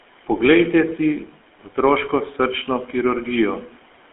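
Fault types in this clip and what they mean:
GSM full-rate codec: the speech went through the original GSM coder, which models the vocal tract and drives it with sparse, regularly spaced pulses, consistent with a 13 kbps stream. This leaves a plainly audible buzzy, gravelly roughness and confines the sound to 250 Hz–3.4 kHz.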